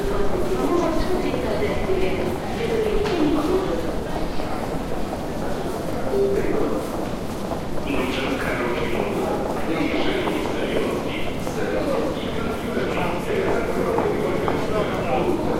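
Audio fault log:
3.49–3.54 s and 9.91–9.96 s, frames out of order: two neighbouring 20 ms blocks seem swapped, giving a brief garbled flutter. Unlike a dropout, no time is lost.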